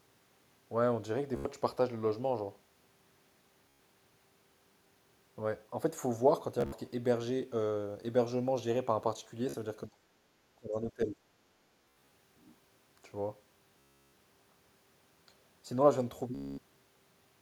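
Bluetooth stutter runs through the whole clip, at 1.36, 3.69, 6.61, 9.49, 11.82, 13.80 and 16.35 s. Each time, packets went missing and the receiver replayed its last slice of speech while it waited. You hear a short buzzy, machine-gun repeat, and then the speech picks up further along, as if it had kept going underneath. The early ones are brief, with about 44 to 102 ms lost. The gap at 6.61 s is broken into bits spread over about 116 ms. The one at 11.82 s is scattered across about 290 ms. The last two are the longest, with about 334 ms gone at 13.80 s and about 232 ms at 16.35 s.

In between, the speech drops out twice, at 9.86 to 10.02 s and again at 10.54 to 11.17 s. The first dip is short and deep, around 30 dB. The second lasts most of 700 ms and sits about 25 dB down. This is likely speech suppressed in double talk. The far end talked over it, and the echo canceller couldn't tell this talker from its own loudspeaker echo, so it turned everything down and chopped the speech.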